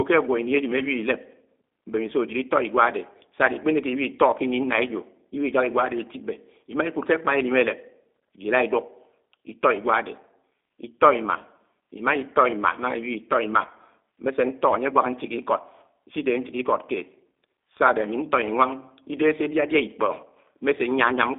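From start to finish the speech carries G.729 codec damage, plainly audible, with a sound that points to the 8 kbit/s G.729A variant. The codec rebuilds each 10 ms frame from a vocal tract filter, a pitch predictor and a few coded pulses, so voicing comes out rough and faintly synthetic. Nothing survives above 3.6 kHz, and the line band runs roughly 250 Hz to 3.6 kHz, leaving the sound thin and boxy. A spectrogram shows a hard ceiling near 3.6 kHz, empty space above it, a weak floor below 250 Hz, and smeared, grainy harmonics in between.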